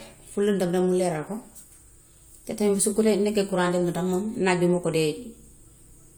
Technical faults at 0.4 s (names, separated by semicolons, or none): none